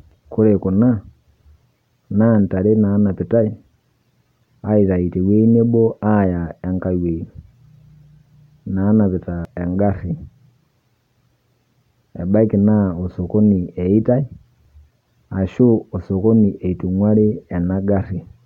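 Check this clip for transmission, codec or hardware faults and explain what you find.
Nothing in the recording points to a transmission, codec or hardware fault: the speech signal stays continuous and stable, with no gaps, level jumps, distortion or timing irregularities anywhere in it.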